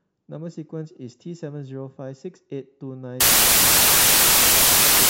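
From 3.21 s to the end, the speech is replaced by loud, harsh broadband noise. This is samples built from the wrong bytes: the reader joins each sample's bytes incorrectly, whether one byte off, in swapped order or under another alignment, so the rapidly varying low bits land in the most significant position and become the bulk of every value, burying the signal in noise.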